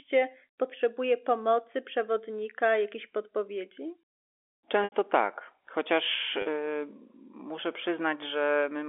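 At 1.72 to 1.74 s, just before "przewodnika jakiejś", packet loss with pitch repetition leaves a 20 ms gap. The receiver bridges it by repeating the last pitch period. It sounds like a brief, buzzy hold. At 4.84 to 4.92 s, before "tak chociaż", 80 ms goes missing. The repeated cycle fades into silence, then speech cross-fades back. At 6.42 to 6.46 s, after "tak chociaż", a 40 ms gap gives a longer buzzy hold. Each gap fits whole lost 20 ms packets.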